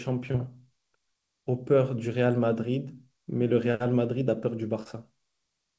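Brief smears in the speech at 0.32 to 0.36 s, 3.72 to 3.76 s and 4.84 to 4.87 s are short concealed packet loss: each time about 20 ms of audio arrived too late, and the receiver extended the preceding sound before blending back. The call path's ceiling at 8 kHz fits a G.722 codec at 64 kbps.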